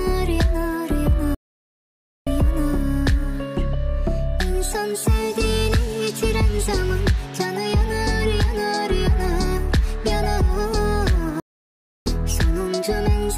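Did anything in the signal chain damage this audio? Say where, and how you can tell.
Yes. At the playback stage, the player most likely starved of data or had its thread blocked. These two playback stalls cut the sound mid-flow to silence from 1.35 to 2.27 s, about 0.92 s, and from 11.40 to 12.06 s, about 0.66 s, before output resumed.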